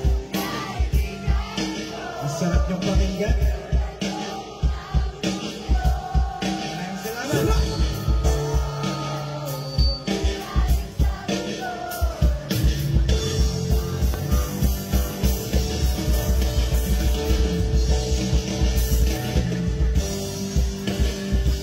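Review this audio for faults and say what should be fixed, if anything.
A loud pop lands at 14.14 to 14.16 s, a single sharp click about 10 dB above the surrounding sound, which continues underneath it. The likely cause is a voltage step or pulse from a plug, switch, static discharge or driver glitch entering the signal chain. Secure connections, avoid switching during recording and ground the equipment properly to prevent it.

DAB burbling appears at 15.51 to 15.60 s as a short burst of burbling. Reception errors slipped past the error correction and corrupted the MP2 data across a few frames, either as stray noise in individual sub-bands or as sub-band level jumps from damaged scale factors. A stronger DAB signal, through a better aerial or position, would prevent it.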